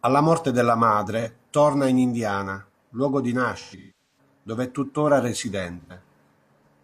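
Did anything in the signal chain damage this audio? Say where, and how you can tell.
Yes, at the codec. AAC frame loss with concealment: smeared, noisy patches at 1.20–1.27 s, 3.59–4.18 s (longest run around 200 ms) and 5.81–5.95 s, where the decoder rebuilt missing frames from the last good spectrum.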